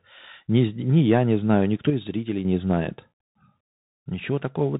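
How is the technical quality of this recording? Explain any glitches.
The quality is poor. The speech has passed through a Bluetooth CVSD headset codec for the whole clip. Each sample is one bit, a step up or down, which fits a 64 kbps stream. Nothing above 3.8 kHz survives. Loud high sounds outrun the step, s sounds turn scratchy, and a granular hiss sits underneath.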